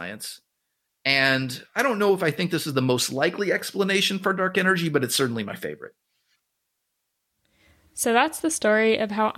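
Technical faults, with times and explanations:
Nothing stood out as a technical problem on listening to this speech.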